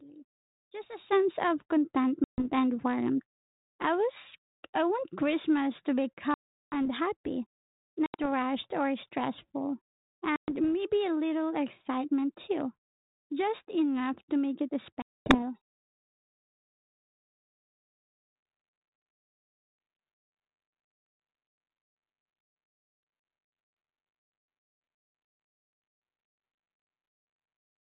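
Speech on a telephone-band line drops abruptly into silence at 2.24, 6.34, 8.06, 10.36, 15.02 and 25.88 s, with holes of 140, 380, 80, 120, 240 and 120 ms, each ending in brief slight roughness before the voice settles. This is packet loss on an ADPCM call: the missing packets, from a handful up to about twenty, were filled with silence, leaving the decoder's adaptive predictor and step size out of step with the sender's until they reconverge.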